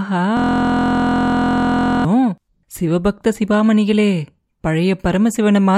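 From 0.37 s to 2.05 s a system hang loop takes over. The driver froze while the sound hardware kept cycling one 23.22 ms slice, which fits a 1024-sample buffer. The speech is replaced by a steady mechanical buzz repeating at 43.1 Hz.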